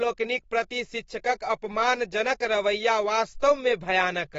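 The encoding was likely starved of bits by AAC compression, consistent with AAC-LC near 24 kbps. Throughout the speech, nothing sounds above 7.6 kHz, so it turns dull and muffled, and the thinned spectrum leaves a plainly audible warbling, fizzy smear on sibilants and sustained sounds.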